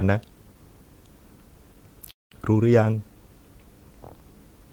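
Speech that, from 2.11 to 2.33 s, trails off into a brief fading buzz or hiss and roughly 170 ms of silence, then resumes exactly where it stopped. This call audio freeze likely comes from delayed packets draining the jitter buffer. About 198 ms is inserted with nothing lost.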